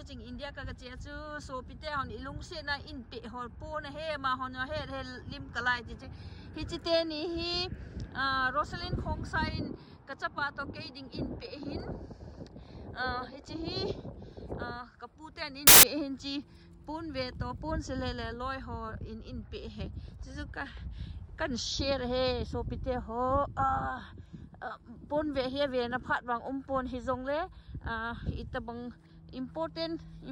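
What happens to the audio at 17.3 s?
Nothing goes wrong at 17.3 s; the audio plays through that moment intact, with no dropout, click, glitch or other fault.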